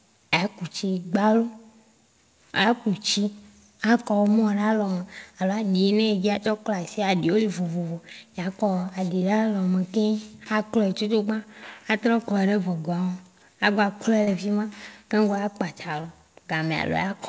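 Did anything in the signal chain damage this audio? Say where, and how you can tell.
Yes, the network stage. There's short concealed packet loss twice: from 14.24 to 14.30 s, between "a gba klɔɛ" and "le fima keŋgbɔ a", and again from 16.01 to 16.07 s. Each is a brief smear where about 30 ms of audio arrived too late, so the receiver stretched the preceding sound across the gap and blended back in. The G.722 call audio, with nothing above 8 kHz, carries through around both.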